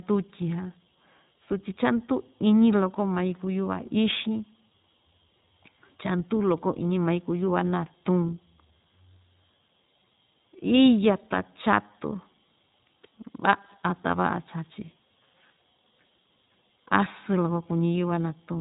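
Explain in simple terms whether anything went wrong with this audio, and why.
Throughout the recording, the speech passed through the iLBC codec, a phone-call compression scheme that codes each 20 ms slice separately. It removes everything above about 3.8 kHz, so the speech sounds muffled, and the compression damage is plainly audible as a rough, synthetic edge.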